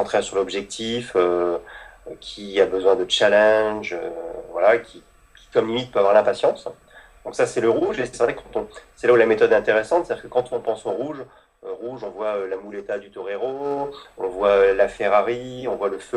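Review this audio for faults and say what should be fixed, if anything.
Zipper noise appears from 10.45 to 11.49 s, as the level drops about 10 dB in 2 dB steps at roughly seven per second, and from 13.57 to 13.97 s, as it rises about 10 dB at roughly twenty steps per second. Each unsmoothed jump leaves a small click, so the ticking follows the level movement. That sets it apart from isolated clicks. Ramping gain per sample, or smoothing each change, prevents it.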